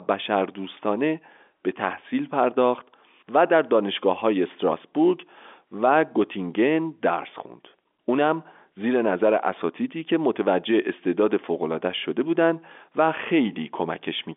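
No technical faults can be heard in this speech recording. The sound has the narrow band of G.711 telephone coding, running from about 250 Hz to 3.5 kHz with nothing above 3.7 kHz.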